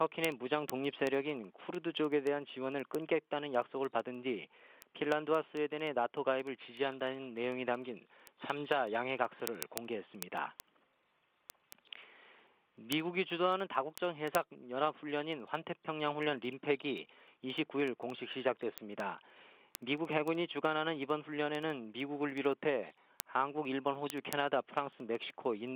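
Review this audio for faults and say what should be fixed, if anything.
There are word clock ticks all the way through, from 0.17 s to 25.75 s: a steady run of sharp little clicks roughly every 70 ms, some louder than others. The receiver's clock is drifting a few hundred ppm off the sender's, so each time the two slip past each other a single sample gets dropped or doubled. To prevent it, slave the receiving device to the incoming digital clock, or run both from a shared word clock.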